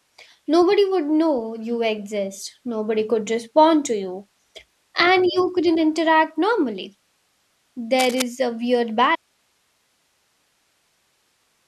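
From 7.98 to 8.22 s, just before "a weird", cable scratch noise sits over the speech. It is a dense, ragged rustle, about 10 dB below the speech. A worn cable or connector was likely moved, making its contact resistance jump about rapidly.

At 9.16 s, after "a weird", the speech cuts out abruptly and never returns. This is an audio dropout to a faint residue. Only hiss remains, far below the speech level, until the end. The signal was likely lost upstream while the later stages stayed live.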